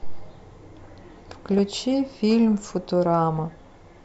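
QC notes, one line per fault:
0.84–1.80 s, DAB burbling. Speech breaks into burbling. Weak reception let bit errors past correction, which fits a rate near 0.4 percent. Corrupt scale factors make single sub-bands jump for up to a frame.
3.74–3.82 s, DAB burbling. A brief burst of burbling, from bit errors in the audio data.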